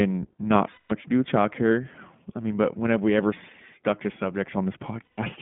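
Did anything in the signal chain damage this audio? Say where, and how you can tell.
Yes. The damage happens at the codec stage and lasts the whole clip. This is the iLBC codec. The speech is confined to a narrow band of roughly 150 Hz to 3.5 kHz and has a plainly audible rough, slightly synthetic grain. That texture fits a 15.2 kbps iLBC stream. A simple telephone band-limit would dull the sound without adding this grain. Because each 20 ms frame is coded independently, the roughness stays even throughout rather than smearing from one frame to the next.

The network stage adds lost iLBC frames at 0.72 to 0.93 s, just before "to do with childcare", and again at 5.05 to 5.20 s. The gaps last about 180 ms and 140 ms, which fits nine and seven lost 20 ms frames. In each gap the decoder repeats the last pitch cycle mixed with noise, so you hear a held, buzzy, breathy vowel. A dropout would give silence, and a stutter would repeat whole chunks of audio. 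Here the speech is clean again almost immediately, because each iLBC frame stands alone.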